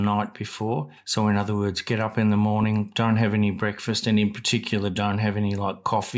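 No technical faults can be heard in this recording.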